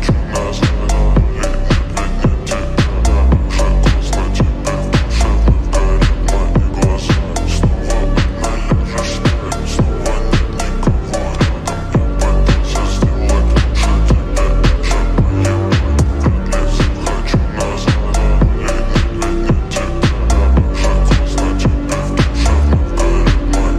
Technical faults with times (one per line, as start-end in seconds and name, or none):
none